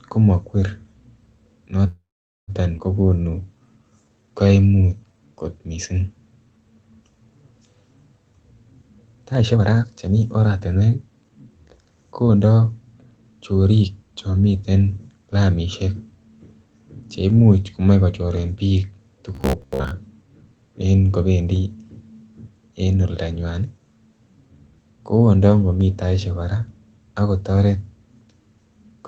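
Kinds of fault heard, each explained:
call audio freeze: From 1.87 to 2.51 s the speech stops dead. The last sound trails off briefly, then there is almost half a second of silence before the speech resumes exactly where it left off. Nothing is lost, but about 0.6 s of extra time is inserted. This is likely a stall in packet delivery. The jitter buffer ran dry and the receiver stretched out the final sound until fresh audio arrived.
skip ahead: At 2.78 s the speech jumps abruptly forward, with only a tiny join of about 15 ms between the two sides. Roughly 0.4 s of speech is simply missing, so the sounds on either side butt together unnaturally. A stretch of audio was discarded while later audio was already waiting, either in transit or by the jitter buffer, and the playback delay shrank by roughly 0.3 s.
jitter buffer slow-down: Between 3.05 and 5.44 s the speech drags. It plays at about 86% of normal speed while the pitch stays unchanged, so sounds are drawn out. 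The receiver was rebuilding its reserve by repeating single pitch periods and small bits of pause over and over. In total it padded the stretch with 352 ms of extra audio.
jitter buffer speed-up: From 9.16 to 12.61 s the speech sounds hurried. It runs at about 117% of normal speed with the pitch intact, which gives it a clipped, rushed delivery. The jitter buffer was holding more audio than it wanted, so it repeatedly cut out short slices of one or a few pitch periods to reduce the delay. Over the stretch it removed roughly half a second of material.
robotic sound from repeated short buffers: At 19.35 to 19.91 s the speech turns into a hard, metallic drone that still loosely tracks the speech. A fixed buzz sits at 66.8 Hz, which fits a short chunk of about 15 ms being replayed again and again. This is likely audio arriving too infrequently, with the software looping the last buffer to fill the time. 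Roughly half of the sound in this stretch is repeated material.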